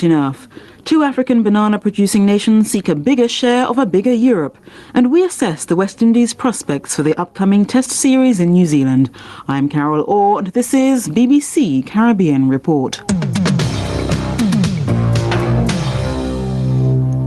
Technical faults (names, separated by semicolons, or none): gain pumping